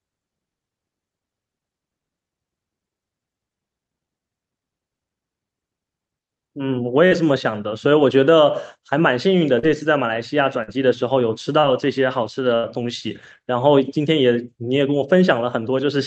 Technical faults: short concealed packet loss; burst of packet loss

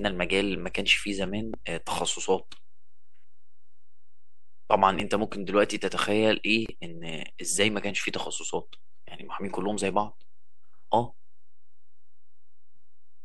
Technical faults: DC offset; loud pop; gap at a join of encoded pieces

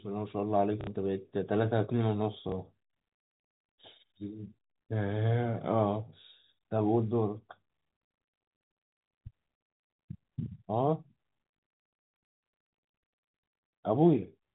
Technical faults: packet loss with last packet repeated

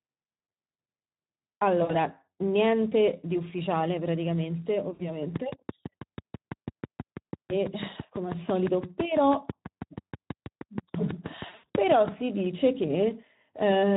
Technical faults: filter restarted on every block; Speex codec; VoIP packet loss concealed by the speech codec; train of clicks

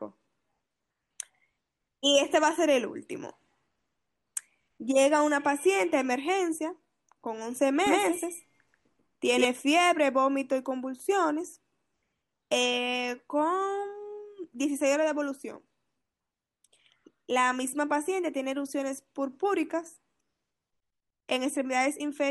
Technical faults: doubled audio track

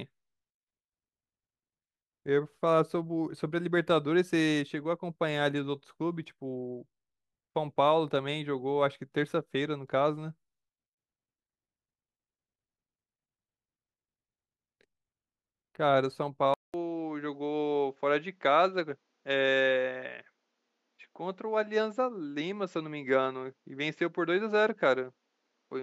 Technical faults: input switched to a poorer device

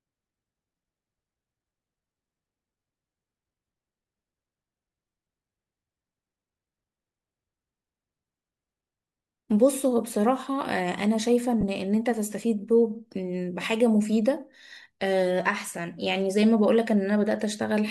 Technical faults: lost LE Audio frames

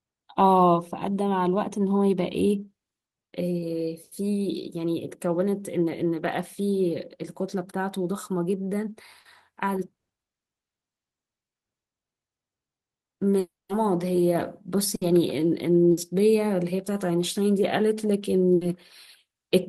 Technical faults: burst of packet loss; long network dropout

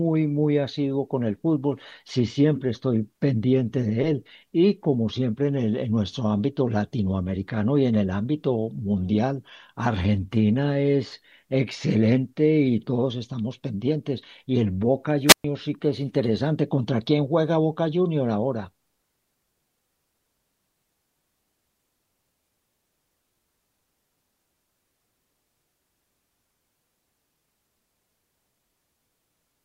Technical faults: wireless microphone squelch dropout

